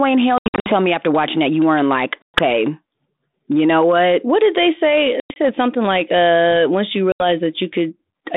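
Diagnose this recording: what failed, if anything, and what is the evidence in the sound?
Network packet loss on this ADPCM call: dropped packets became silence at 0.38 s, 2.23 s after "that you weren't like", 5.20 s after "did they say" and 7.12 s after "like uh once you". Each hard-edged gap desynchronises the decoder's adaptive predictor, so speech resumes mis-levelled, clicky or briefly distorted.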